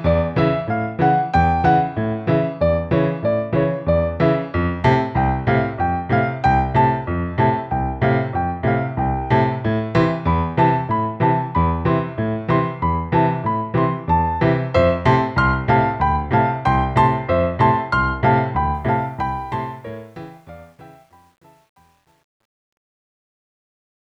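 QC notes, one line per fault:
18.75–24.18 s, truncation distortion on a fade: as the fade-out that begins around 18.7 s drops toward silence, the level stage rounds each sample to too few steps without dither, which fits a 10-bit stage. From 19.99 s to the end, the tail turns gritty.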